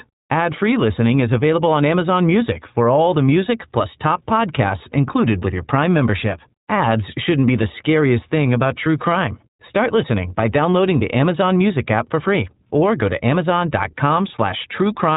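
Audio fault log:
Throughout, iLBC codec: the speech is band-limited with nothing above 4 kHz, and sounds clear but plainly rough and synthetic. Each 20 ms frame's excitation is coded independently of the previous frame, and the coarseness fits a rate near 15.2 kbps.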